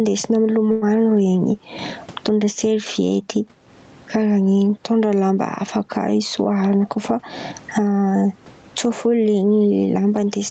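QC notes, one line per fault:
Throughout: gain pumping. Loud and quiet syllables sit unnaturally close together, giving the speech a flattened, squeezed quality. The likely cause is input gain set far too high for the microphone, with a fast limiter or compressor clamping down on each loud sound and swinging the level by about 20 dB.
0.71–0.84 s: call audio freeze. For about 104 ms the sound stops moving forward and the last moment is stretched into a brief fading buzz or hiss before the speech picks up again exactly where it left off. Nothing seems to be lost, but the rest of the clip now runs about 104 ms later. This is likely a packet delay that let the jitter buffer run dry, with the receiver filling the wait by continuing the previous sound.
6.55–7.53 s: jitter buffer speed-up. Right after "mitondra lamba hafa kà" the speech rushes forward for about a second, running roughly 10% fast while the pitch stays unchanged, so the talker sounds briefly hurried. 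The receiver had built up more buffered audio than it wanted, so to catch up it cut out many short pitch-period-sized slices one after another, trimming around a tenth of a second in total.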